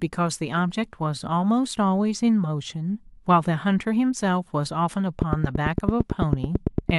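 From 5.22 s to 6.91 s, a steady ticking cuts across the speech: a train of clicks, around fifteen of them, evenly spaced at about 8.9 per second. Each click is sharp and much the same as the last, standing out roughly 20 dB above the speech, so it pokes through both the speech and the gaps between syllables. The regular pulses most likely come from electrical interference from nearby equipment or a faulty connection or power supply.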